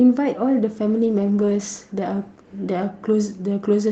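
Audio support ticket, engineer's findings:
Call bitrate drop, 0.9–3.49 s. Speech turns rough and watery, then clears. The Opus encoder was told to spend far fewer bits after the call's bandwidth estimate fell, so it codes more coarsely. The sound points to a fall from about 32 to 15 kbps, bottoming out for roughly 1 s. Outside this span, the Opus call path tops out near 8 kHz.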